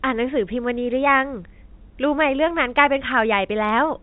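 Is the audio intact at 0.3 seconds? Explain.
Yes, at 0.3 seconds the speech is intact, with no dropout, click or distortion, only the narrow telephone band of G.711 telephone coding.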